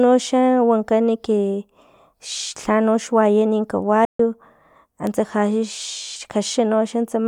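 At 4.05 s the speech cuts to silence in mid-flow for about 143 ms, then resumes at 4.20 s. This is a playback stall: the player likely ran out of buffered data or had its thread blocked, so output went quiet until it recovered.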